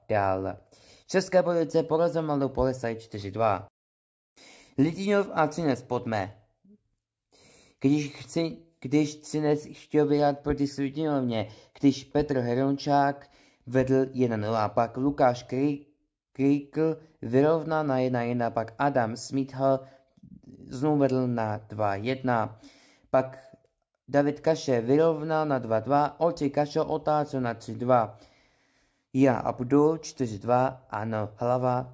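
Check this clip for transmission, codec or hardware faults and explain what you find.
I found no faults in this clip.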